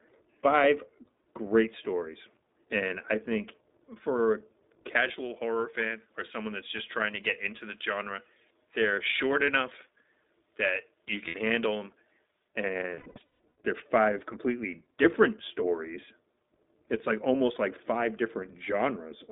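Throughout the speech, the iLBC codec holds everything within a line band of roughly 200 Hz to 3.7 kHz, so there is no air above that and the voice has a rough, slightly synthetic grain. The 20 ms frame rhythm and the texture point to iLBC's 15.2 kbps mode. Unlike a generic low-pass or a lossy music codec, the damage sits in the excitation: the voice stays intelligible, but its buzz sounds manufactured rather than smeared or swirly.

From 4.96 s to 12.47 s, pre-emphasis is left on. A treble boost following the J.17 curve, about 11 dB up at 10 kHz relative to 1 kHz, was never undone, so within the narrow band the upper range turns thin, bright and hissy on sibilants. It starts and stops as a clean step in tone, which separates it from a cheap microphone or a presence EQ applied to the whole clip.

At 11.28 s, lost iLBC frames leave a 60 ms hole, which fits three 20 ms frames. The decoder fills it by repeating the last pitch cycle mixed with noise, so a vowel briefly freezes into a buzzy drone. 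From 12.90 s to 13.55 s the losses are scattered, 500 ms missing over about 0.68 s, with the longest run around 150 ms. These runs fade into a breathy hold, then snap back almost at once. A dropout would leave silence, and jitter would make the timing stutter.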